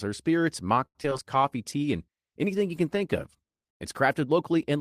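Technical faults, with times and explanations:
0.85–1.20 s, repeated packet loss (robotic sound): just after "or spirits", four gaps (longest 95 ms) are patched by stretching the previous sound, leaving about a third of the span synthetic and choppy. The spectrogram shows smeared, repeated harmonic slices, and the waveform shows short dropouts.
1.24–1.79 s, jitter buffer slow-down: the receiver repeats single pitch periods to rebuild its reserve, adding 48 ms so this stretch plays at 93% speed without any pitch change. The waveform shows near-identical cycles copied back to back, and spectrogram harmonics look drawn out.
1.32 s to the end, call bitrate drop: the sound turns rougher and watery, which points to the encoder falling from about 32 kbps to about 18 kbps as the bandwidth estimate sank. It stays at the lowest rate for roughly 1.9 s. The spectrogram shows thinned, blotchy upper bands.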